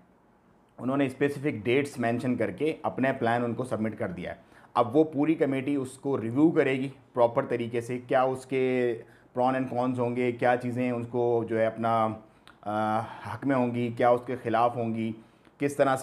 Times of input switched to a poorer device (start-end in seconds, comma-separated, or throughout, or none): none